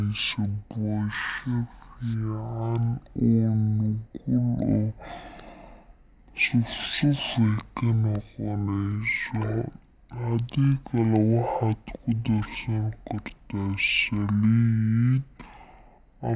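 From start to finish the clip suffers a wrong sample rate: the samples are being clocked out at half the rate they were captured at, with no conversion in between, which fits 16 kHz audio played back at 8 kHz. Because speed and pitch are tied to that clock, the speech runs at 0.5 times its natural pace and sits a full octave, 12 semitones, too low, sounding slow, deep and dragged out.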